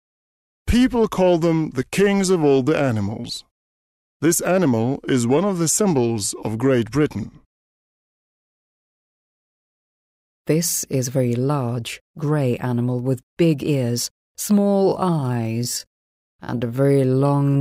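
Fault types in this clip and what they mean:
Time-stretched section: from 14.61 s to the end, the pace abruptly drops to roughly half speed while the pitch holds steady, so the passage drags. This is likely software lengthening the passage by repeating short slices of audio to fill extra time without lowering pitch.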